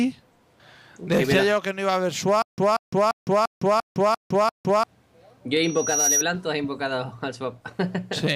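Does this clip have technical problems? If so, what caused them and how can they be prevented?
Yes. Stutter with silent gaps, from 2.42 to 4.84 s: a 186 ms fragment of sound plays, then about 159 ms of dead digital silence follows, and the same burst returns seven times at a steady 345 ms rhythm. This is likely a stalled player or stream that replays its last buffered piece on each retry and then runs dry, so the audio that belonged in that stretch never arrives. Larger buffering and a stable connection or decoder prevent it.

Loudspeaker feedback squeal, from 5.63 to 6.24 s: a single 5.8 kHz tone swells over a little under half a second until it sits roughly 5 dB above the rest of the sound. A microphone is hearing the loudspeaker it drives, and at that frequency the loop gain passes unity, so the tone feeds on itself until it is limited or the loop is broken. Reducing gain, repositioning the microphone away from the speaker, or notching 5.8 kHz prevents it.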